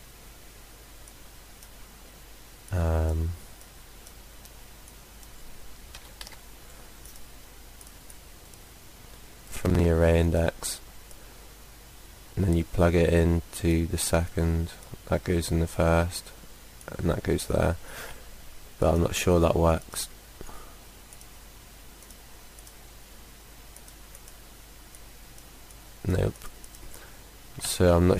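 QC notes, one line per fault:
8.41–9.86 s, buffer tearing: a rough, robotic rattle at about 21.5 Hz sits on the sound for this stretch, which fits a 2048-sample buffer. The writing side and the hardware reading side have drifted so their positions cross inside each period. About a fifth of every buffer is stale audio from roughly a tenth of a second earlier, spliced in with abrupt joins at both edges. Those repeating discontinuities produce the buzz at the buffer rate.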